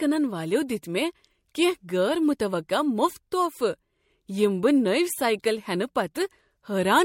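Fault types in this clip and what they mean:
Generation loss: the speech sounds swirly, smeared and hollow throughout, with blurred consonant attacks and nothing above 16.6 kHz, likely from roughly three successive MP3 passes at a rate near 64 kbit/s, each requantising on a shifted frame grid so artefacts accumulate.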